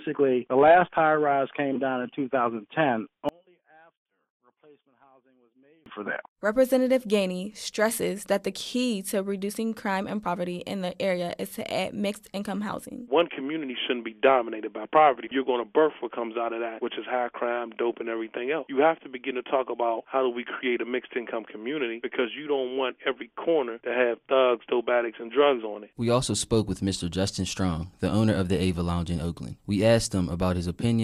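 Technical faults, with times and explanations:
3.29 to 5.86 s, one channel inverted: for about two and a half seconds the sound drops away sharply, roughly 36 dB down, leaving only a faint residue before everything snaps back. That's what you'd hear if one stereo side likely had its polarity flipped and the pair got folded to mono. Whatever the two channels share cancels out, so the centre and low end vanish and only the small left-right differences survive.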